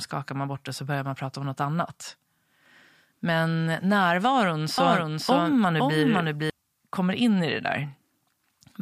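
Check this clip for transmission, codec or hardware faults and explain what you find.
One fault is present: a doubled audio track from 4.78 to 6.50 s. A second full-band copy, about as loud, trails by roughly half a second, likely from a slower parallel capture path, and starts and stops abruptly.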